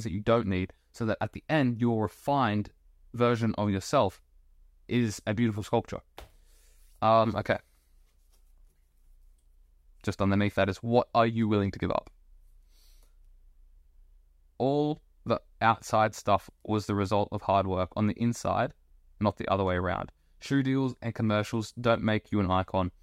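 No technical faults can be heard anywhere in the recording, so there is nothing to place in time order.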